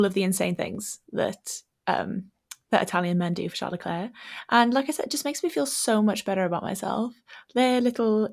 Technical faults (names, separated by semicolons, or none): none